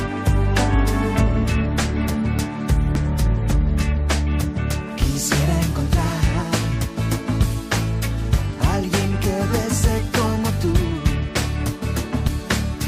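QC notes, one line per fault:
2.95 s, 6.73 s, 12.28 s: damaged data in a compressed stream. Corrupted bytes make the decoder misread a frame and resync, giving a brief glitch, each under 20 ms.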